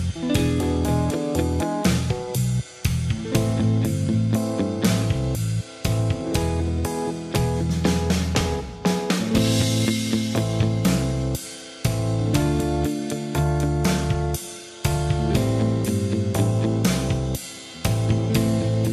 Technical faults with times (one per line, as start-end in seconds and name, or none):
none